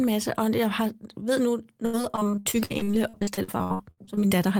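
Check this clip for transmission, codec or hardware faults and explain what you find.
One transmission fault is present. From 1.85 to 4.33 s, repeated packet loss (robotic sound): dozens of short dropouts, the longest about 78 ms, patched by stretching prior sound, leaving choppy speech with pieces missing and about 37% concealed. Spectrograms show repeated smeared, frozen harmonic blocks; waveforms show abrupt, looping segments.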